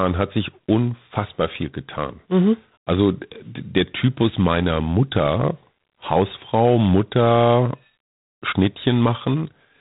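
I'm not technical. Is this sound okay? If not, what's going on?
No. Throughout the speech there's a harsh, rasping hiss that rises and falls with the talking, and the sound is dull and muffled, as on a phone. This is G.726 ADPCM, a telephone codec running at a reduced setting, which drops everything above about 3.9 kHz.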